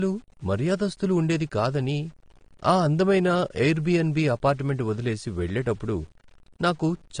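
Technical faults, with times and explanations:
Throughout, low bit depth without dither: a grainy, gritty distortion follows the speech and roughens its quietest moments, sitting roughly 35 dB below the signal. The signal was likely cut to very few bits with no dither, which fits 8-bit truncation.
Throughout, low-bitrate audio saved at a high bitrate: the speech sounds dull, with nothing above 9.7 kHz. That missing top points to an earlier low-bitrate AAC encode, likely re-saved as a high-bitrate MP3, which cannot restore what the first codec discarded.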